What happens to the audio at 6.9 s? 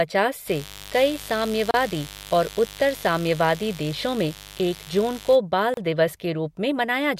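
Nothing goes wrong at 6.9 s; the audio carries on intact through that moment, with no dropout, click or distortion.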